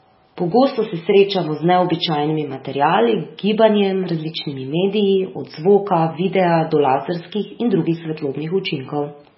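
Throughout, the speech sounds watery and swirly with nothing above 5.6 kHz, most likely heavy MP3 compression starving bits, which fits a very low bitrate around 16 kbps.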